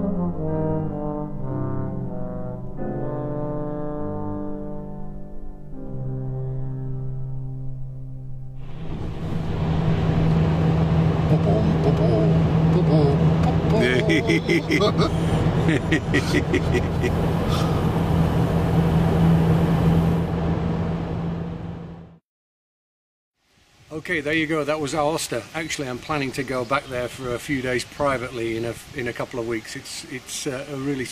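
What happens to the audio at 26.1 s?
Nothing goes wrong at 26.1 s; the audio runs through that moment intact, with no dropout, click or distortion.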